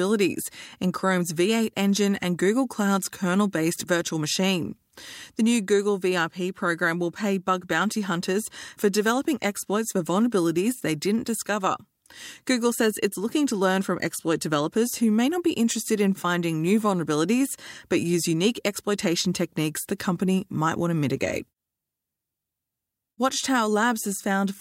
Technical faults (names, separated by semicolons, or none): none